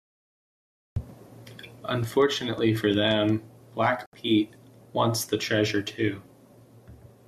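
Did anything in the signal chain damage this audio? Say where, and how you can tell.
Yes. Cut-off start at 0.96 s: digital silence until then, and the speech enters mid-sound with no attack, so capture or storage began late.

Train of clicks from 2.04 to 3.30 s: about seven evenly spaced pulses at 5.6 per second, roughly as loud as the speech, likely interference in the analogue wiring.

Digital broadcast dropout from 4.06 to 4.14 s: a 72 ms hole where the receiver muted corrupted frames, which fits three lost frames at the codec or reception stage.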